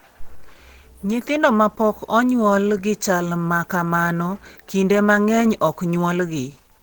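From start to end, the speech sounds muffled and hoarse, with a grainy roughness in its voiced parts. The damage is plainly audible. This is likely Opus compression. At low rates the encoder falls back to its speech-oriented hybrid mode. It codes the lower band with a speech model and fills the upper band by folding or noise. The roughness fits a rate near 16 kbps. The band still reaches about 20.2 kHz, so the fault is texture, not dullness.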